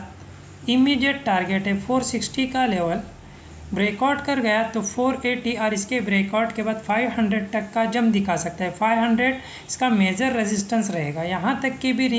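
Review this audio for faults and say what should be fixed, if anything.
Nothing here needs fixing; no faults were detected anywhere in the audio.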